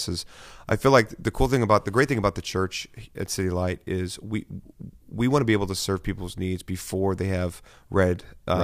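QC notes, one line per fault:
No technical faults can be heard anywhere in the speech recording.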